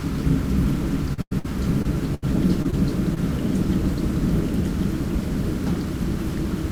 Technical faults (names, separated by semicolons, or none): doubled audio track; short concealed packet loss; burst of packet loss